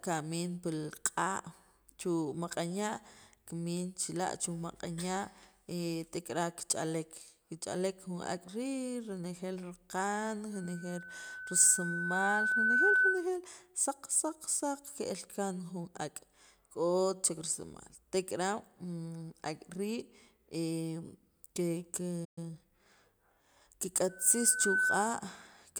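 At 10.53 s a loudspeaker feedback squeal begins: the microphone is picking up the loudspeaker it feeds, and at 1.5 kHz the loop gain has crossed one, so that tone reinforces itself on every pass. It swells over roughly two seconds to sit about 10 dB above the speech before stopping at 13.29 s. A spectrogram shows a single bright horizontal line at 1.5 kHz thickening from faint to dominant. The waveform shows an envelope that fattens steadily into a dense, regular band.

At 22.24 s the speech cuts out in mid-flow for 120 ms, a playback stall. The player most likely ran short of data or had its output thread held up, and went silent until it recovered. On a waveform this is a flat, empty gap. On a spectrogram it is a clean vertical blank stripe across all frequencies.

From 22.38 s to 22.86 s the player makes up the lost time with time-compressed catch-up. It trims small pieces from its backlog and cross-fades across the cuts, so the speech runs about 1.25 times faster at unchanged pitch. 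The spectrogram keeps its harmonic spacing while syllable patterns crowd together horizontally.

A second, shorter feedback squeal runs from 24.09 s to 25.20 s at the same 1.5 kHz. This time it builds in under a second and peaks about 5 dB above the speech. It is visible as a shorter, fainter line at the same height on the spectrogram.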